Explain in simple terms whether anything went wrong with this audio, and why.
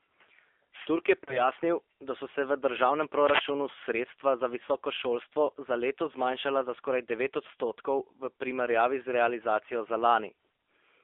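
The whole clip went through the AMR narrowband mobile codec, the old phone-call squeeze. Everything above about 3.5 kHz and below 300 Hz is gone, so the speech sounds thin and boxed-in, and the codec's low-bit rebuilding gives it a clearly buzzy, slightly artificial edge.

There are also two spots of lost AMR speech frames. Around 1.24 to 1.49 s, two frames went missing, so the decoder stretched out the last sound and faded it before the speech came back a bit rough. A single lost frame causes a shorter wobble at 4.66 to 4.70 s.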